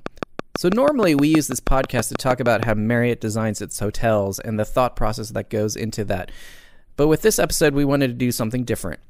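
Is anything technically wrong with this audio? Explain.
Yes. A train of clicks runs from 0.06 to 2.64 s: around fifteen evenly spaced pulses at 6.24 per second, peaking about 15 dB above the speech. A faulty connection or nearby equipment is likely injecting them, heard as steady ticking over the sound and through the pauses.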